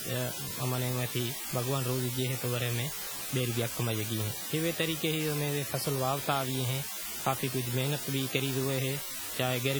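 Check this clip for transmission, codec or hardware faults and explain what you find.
Two faults run through the whole speech clip.

Low bit depth with dither lasts from start to end. The sound seems stored with about 5 bits, with dither added before rounding. That turns the rounding error into steady white noise. It is a constant, even hiss with no distortion, nearly as loud as the speech itself.

Heavy codec damage is also present throughout, likely from WMA compression. The smearing fits a low bitrate around 32 kbps. Long transform blocks spread quantisation noise over tens of milliseconds and drop weak components. The speech sounds ringing and washy, with a hiss that swells and fades with the signal.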